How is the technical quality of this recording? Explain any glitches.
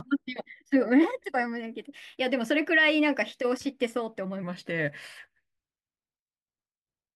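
The recording has one clear fault, a section at the wrong speed at the start. From 0.0 to 4.43 s, the audio was likely played against the wrong clock, running about 1.12 times faster than it was captured. Because speed and pitch are tied together in that case, the speech comes out both hurried and raised by roughly two semitones, before dropping back to its natural pace and pitch at 4.43 s.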